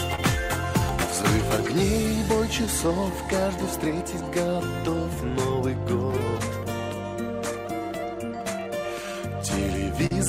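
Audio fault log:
throughout clock drift between sender and receiver. The sending clock runs about 3% slow. The receiver's buffer keeps draining. It must pad the audio to keep up. Small timing hiccups recur across the clip, unevenly spaced.
0.15 to 3.43 s scattered short gaps. About seven small holes appear, the longest around 30 ms. Each is patched by carrying the last sound forward. Nothing is lost. Brief ticks and smears come through, totalling about 70 ms.
1.77 to 9.43 s repeated timing corrections. The receiver keeps adding short pieces to match the slow sender. Playback runs at 98% speed. Roughly 150 ms is added in all.
5.30 to 6.41 s scattered short gaps. About three more tiny holes are filled by continuing the prior sound. None lasts more than about 10 ms. They pass as brief ticks or smears.
10.06 to 10.13 s short stall from a late packet. A packet arrived 44 ms late and the buffer ran dry. 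The last sound was held for 44 ms until it came. Nothing is skipped, but one moment drags with a slight buzz or dip.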